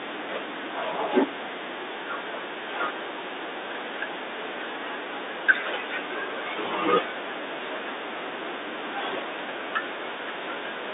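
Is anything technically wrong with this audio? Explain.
No, nothing's wrong here; this is ordinary G.711 telephone-line speech, so the sound sits in the usual narrow phone band of roughly 300 Hz to 3.7 kHz, with nothing above about 3.8 kHz, just as a normal call does.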